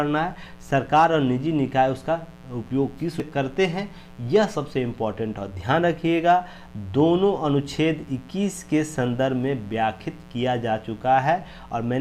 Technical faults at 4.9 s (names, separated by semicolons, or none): mains buzz